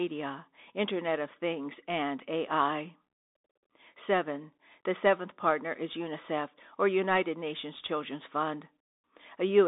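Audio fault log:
Throughout, Bluetooth CVSD headset codec: one-bit slope coding confines speech to 250 Hz–3.7 kHz, nothing above 3.8 kHz, leaving scratchy s sounds and granular hiss.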